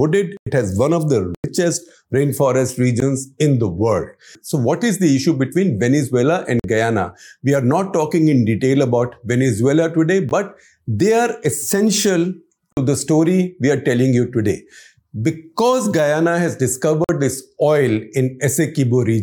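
Blocks of digital silence cut the speech at 0.37, 1.35, 3.00, 6.60, 10.29, 12.73 and 17.04 s, lasting about 93, 93, 16, 46, 17, 46 and 46 ms. Buffers likely went unfilled, 4096 or 2048 samples, leaving flat silent stretches with abrupt vertical edges on the waveform.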